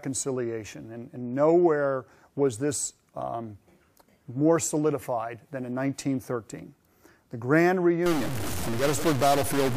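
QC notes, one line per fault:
8.06–9.77 s, stuck bit: one data bit is likely held at a fixed value, so about half the sample values are off by that bit's weight and quiet gaps fill with noise.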